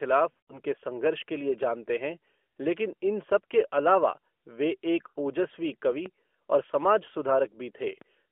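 Lost AMR speech frames at 0.32 to 0.59 s, just before "संघर्ष के लिए जानते": failed frames were concealed by repeating the last good pitch and vocal-tract settings at falling gain. About 120 ms of gaps are scattered over 160 ms, the longest 60 ms, giving stuttering warbles and fades.

A DC step at 1.63 s, between "संघर्ष के लिए" and "जानते हैं लेकिन इन", shifts the waveform's zero line abruptly. It is heard as a low thump under continuing speech, and the offset then decays away, as a roughly 5 Hz high-pass would drain it.

Lost AMR speech frames again at 5.08 to 5.18 s, right after "वे एक": roughly 80 ms concealed, so the sound smears, sags toward silence and returns weak.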